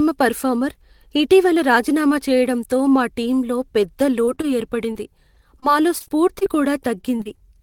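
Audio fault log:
4.25, 4.35, 4.41 and 4.93 s: short concealed packet loss. About 20 ms of speech missed the decoder each time and was bridged by extending the preceding sound, heard as a quick smear or wobble. A spectrogram shows brief smoothed patches where harmonics stretch unnaturally flat before resuming.
5.35 to 6.47 s and 7.01 to 7.42 s: repeated packet loss (robotic sound). Nine and then five gaps, the longest 42 ms, were each patched by continuing prior sound, so the speech turns choppy with pieces missing. The spectrogram shows recurring flattened, repeated slices; the waveform, stuttering segments.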